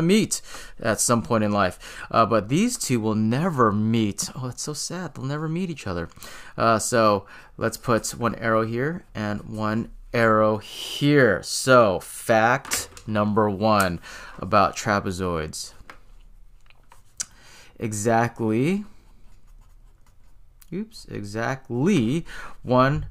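No technical faults can be heard in this audio.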